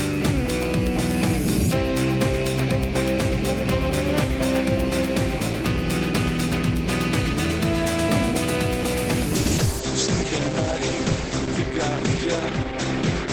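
A call bitrate drop at 9.37 s lasts to the end. The sound turns coarse and muffled, with the top cut from 20 kHz to 8 kHz, which fits a fall from 48 to 11 kbps.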